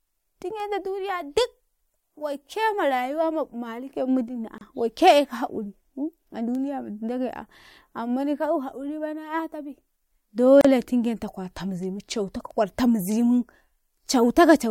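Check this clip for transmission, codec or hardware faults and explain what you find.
Two brief dropouts cut into the speech. Each is a gap at a join of encoded pieces. Just after "yaumi iddini", a gap of about 30 ms opens from 4.58 to 4.61 s. A second of about 34 ms runs from 10.61 to 10.65 s, right before "tingenta kwarta muzimu". The codec smears the edges, and speech resumes where it stopped. The gaps sit 6.0 s apart, matching segments encoded separately and joined without trimming the encoder's start-up delay and last-frame padding.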